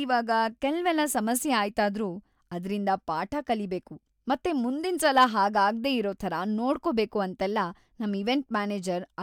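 A stage overloaded by about 3 dB between 5.05 and 5.24 s, after "ಅದ್ರಿಂದ ಪಾಠ ಕಲಿಬೇಕು ಮತ್ತೆ", flattening the speech peaks into brief hard clipping crackle before "ಹಾಗಾಗ್ದೇ ಇರೋ ಥರ ನೋಡ್ಕೊಬೇಕು".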